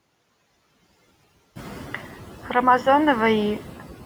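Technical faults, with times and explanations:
Throughout, noise suppressor artifacts: bands judged to be steady noise are cut by about 16 dB frame by frame, so the background sinks in pauses and returns under speech, reshaped in tone rather than switched off as a gate would, even once room noise rises near 1.5 s.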